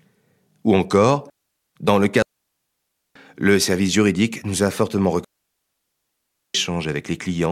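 A speech clip with two digital wireless dropouts, clean near-silent holes where the receiver mutes after losing data: 2.22–3.16 s (about 0.93 s, after "encore dans le", before "le service juridique nous") and 5.25–6.55 s (1.3 s, after "juridique nous a fortement"). Each shows as a flat-line gap in the waveform and a blank vertical band on a spectrogram, with no noise burst at either edge.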